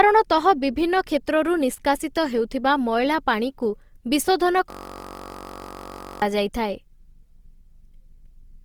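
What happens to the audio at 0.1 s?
At 0.1 s, as throughout the clip, the speech is most likely passing through Opus compression in its music mode at a rate that fits about 24 kbps. Starved bands are refilled with folded or noisy content, so the speech sounds plainly rough and grainy.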